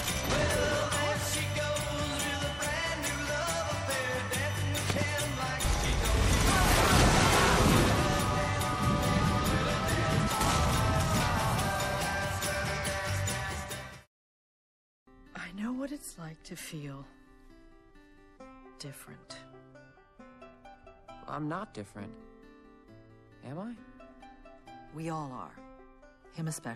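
From start to finish there's clearly audible damage of the kind MP3 compression leaves behind. Quieter detail has a watery, swirling quality as faint components flicker in and out from one frame to the next. Sharp, hissy elements pick up a metallic chirp, and attacks sound smeared. The likely cause is an encoder short of bits, which fits a low rate somewhere around 64 kbps.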